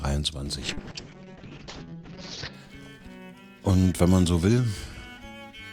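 From 0.66 to 2.59 s, a call bitrate drop makes the audio rough and muffled. A spectrogram shows the top cut from 20 kHz to 8 kHz, which fits the encoder falling to about 6 kbps.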